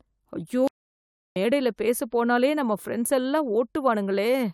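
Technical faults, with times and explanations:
0.68–1.36 s, stream reconnect: the speech cuts to silence for 0.67 s, then resumes at "பேச போனாலே நம்ம ஃபிரண்ட்ஸ்" roughly 0.7 s further on. The connection dropped, and the player rejoined the live stream with a fresh decoder, so that stretch of speech never arrived.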